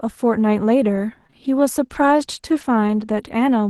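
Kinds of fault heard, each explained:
Scattered short gaps: about four tiny packet losses between 0.95 and 3.29 s, each patched by stretching the preceding sound, leaving brief smears or ticks rather than silent dropouts.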